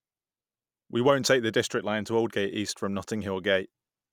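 A short speech recording with no technical faults to report. Nothing in it calls for a time stamp or a cause.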